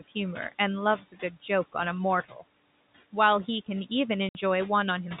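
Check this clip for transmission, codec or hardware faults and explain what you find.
Three kinds of fault are audible: noise suppressor artifacts across the whole recording, two stretches of speech cut by the noise suppressor, and one gap from packet loss filled with silence.

Noise suppressor artifacts run from start to finish. The suppressor pulls down whatever bands it judges to be steady noise, by about 17 dB, frame by frame. The room noise, sitting about 19 dB under the speech, drops away in pauses and returns beneath speech.

Speech cut by the noise suppressor occurs from 1.01 to 1.49 s and from 2.24 to 2.43 s. The suppressor mistook low-level speech for noise and attenuated it, by up to about 12 dB in the first stretch and about 15 dB in the second. Roughly a fifth of a second, then a tenth, sounds swallowed and faint.

Packet loss filled with silence appears from 4.29 to 4.35 s. 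Audio packets failed to arrive and the receiver inserted pure silence, a 60 ms hole that fits two lost 30 ms packets. The speech breaks off abruptly there, with hard edges. Throughout, the narrow telephone band of the G.711 coding is audible, with nothing above 4 kHz.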